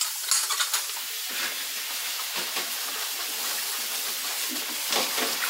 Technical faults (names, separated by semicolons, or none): section at the wrong speed; damaged data in a compressed stream